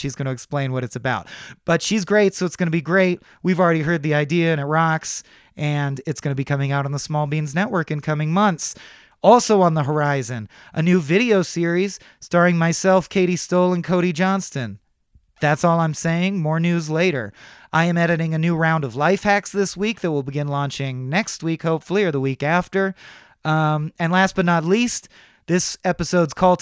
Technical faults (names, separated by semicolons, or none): none